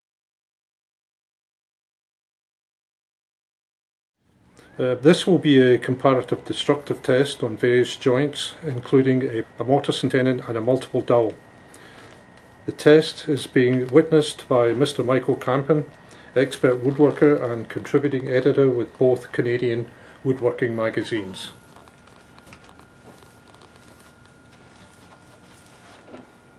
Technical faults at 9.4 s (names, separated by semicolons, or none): skip ahead